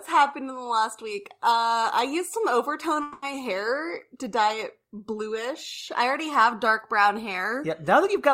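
A long network dropout runs from 3.02 to 3.23 s in this speech clip. For about 200 ms the sound turns into a smeared, buzzy continuation of what came just before, and it never falls to silence. The likely cause is a stretch of audio that never reached the receiver, which covered the whole gap by extending the last sound it had. When the signal returns, those 200 ms of the original are simply gone.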